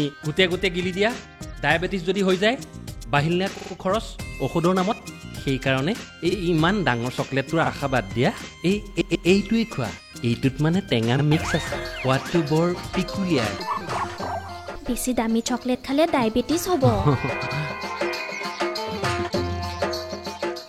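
The audio stutters from repeated frames at 3.53, 6.27, 7.62, 8.97, 11.15 and 17.42 s. Compressed blocks of 46 to 139 ms replay, lengthening the audio each time.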